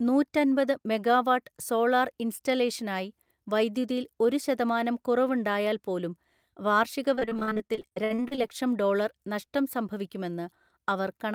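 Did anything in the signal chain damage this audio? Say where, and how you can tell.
Yes, at the network stage. From 7.15 to 8.51 s there is repeated packet loss (robotic sound): about twenty short dropouts, the longest 60 ms, each patched by stretching the preceding audio. Roughly 40% of that stretch is concealment, giving choppy speech with pieces missing.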